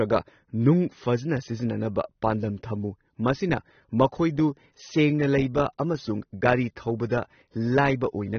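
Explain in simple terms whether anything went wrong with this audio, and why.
AAC compression is the likely cause of the damage heard throughout the clip. The speech sounds dull and smeared, with nothing above 6.3 kHz, because the encoder, short of space, discarded the high frequencies and coded what remained too coarsely to keep fine detail.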